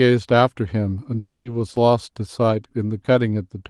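A speech clip carried over a WebRTC call path, with Opus coding noise and a top end that stops near 12 kHz. From 1.19 to 1.47 s there is a long network dropout, likely lost packets: about 260 ms of audio is missing, concealed by a fading buzz, then roughly 140 ms of silence before speech resumes. At 1.77 s a block of digital silence of 5.8 ms, which fits a 256-sample buffer left unfilled, cuts in and out abruptly and is heard as a tick or dip.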